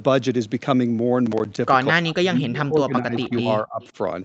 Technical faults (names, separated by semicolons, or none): processor overload crackle; speech suppressed in double talk; echo leak